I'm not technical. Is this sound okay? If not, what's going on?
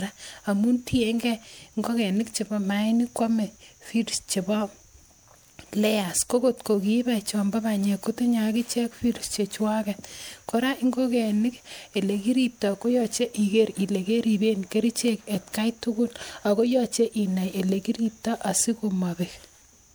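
No. The recording shows generation loss, and the likely cause is that it was saved as an MP3 several times over, perhaps around four, instead of just once. Each save throws away a little more detail in a slightly different place, and the damage piles up. From start to finish the speech sounds swirly and hollow, as if heard through a tube, and the crisp starts of sounds are blurred and softened.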